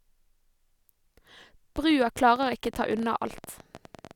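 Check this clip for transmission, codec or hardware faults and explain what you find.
There is one fault: a train of clicks. It runs from 1.76 s to 4.12 s, close to the end of the speech. The clicks arrive at about 14.9 per second, with uneven spacing. That adds up to around forty of them. Each has much the same sharp shape. They peak at roughly the level of the speech itself. The likely source is electrical interference or a faulty connection or power supply. It heard as a ragged ticking over the speech and through the pauses.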